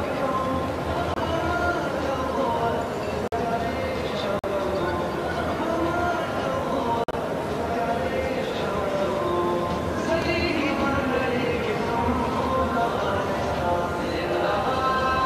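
Corrupt frames are muted at 1.14–1.21 s, 3.24–3.34 s, 4.39–4.45 s and 7.04–7.14 s. Damaged compressed frames were rejected and replaced with silence. Each gap cuts in abruptly, without shifting timing.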